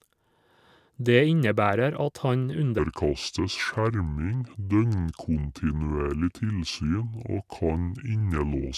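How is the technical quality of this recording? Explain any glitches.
The recording has one clear fault: a wrong sample rate for the last part of the clip.

From 2.79 s to the end, just after "innebærer at han", the audio plays back too slowly. Speed falls to 0.726 times normal and pitch drops by 5.55 semitones, which fits material recorded at 44.1 kHz being played at 32 kHz with no conversion. The speech turns deep, dragged and heavy. On a spectrogram, harmonics and formants shift downward by the same ratio. The waveform's syllables stretch out in time.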